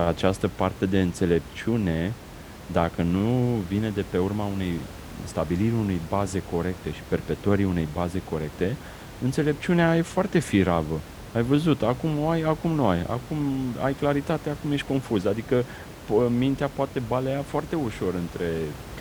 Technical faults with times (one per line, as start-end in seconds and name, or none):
none